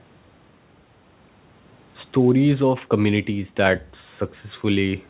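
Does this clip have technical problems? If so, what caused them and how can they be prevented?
No, this clip has no technical problems, so there is nothing that needs preventing.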